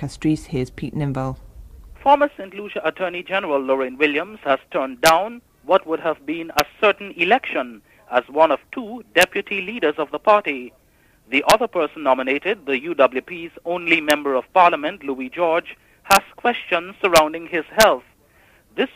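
Integer overflow cracks at 5.06–5.09, 6.59, 9.21, 11.5, 14.10, 16.11–16.17, 17.16–17.18 and 17.81–17.83 s: peaks only about 0–2 dB over full scale wrap to the opposite sign, producing violent cracks.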